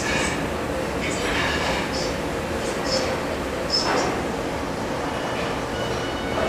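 No technical faults are audible anywhere in the recording; the everyday sound comes through without interruption or defect.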